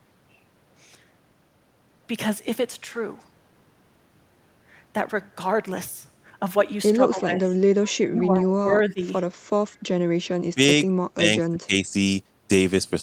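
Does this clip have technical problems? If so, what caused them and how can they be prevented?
Yes: speech suppressed in double talk at 7.07–7.53, 8.11–8.33, 8.51–9.04, 10.43–10.61, 10.86–10.94 and 11.16–11.93 s. The speech drops by roughly 10 to 20 dB in each span, likely because the echo canceller could not separate this side's talk from the overlapping loudspeaker echo and ducked both. Better echo modelling with proper double-talk detection would prevent it.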